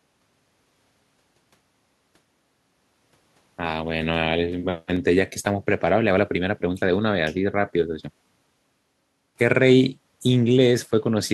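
No technical faults can be heard anywhere in the recording, and the signal holds steady throughout.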